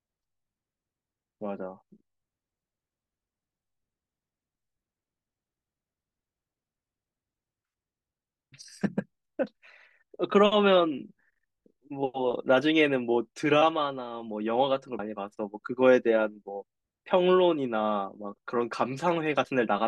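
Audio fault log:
14.99 s, compressed frames skipped: the audio lurches forward by about 70 ms. The jump fits roughly two whole 32 ms frames that never reached playback, either missing from the stream or rejected as damaged by the decoder.
19.44 s, compressed frames skipped: a smaller jump of about 30 ms, consistent with a single lost frame.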